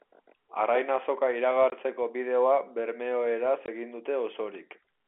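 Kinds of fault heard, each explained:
Packet loss filled with silence: twice the speech drops to dead silence for 20 ms, one packet's worth, at 1.70 s just before "bideoa bermeoeraz egin" and at 3.66 s right after "bideoa bermeoeraz". The gaps have hard edges, unlike concealed loss, which smears the gap, over a clean telephone band.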